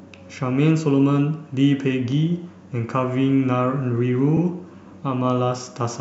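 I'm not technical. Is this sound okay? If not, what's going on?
No. At about 4.37 s the speech stutters for a moment. This is a repeated frames fault. A tiny piece of audio, about 52 ms long, was stored twice, so it plays again. That fits two compressed frames being duplicated. The clip runs 52 ms longer.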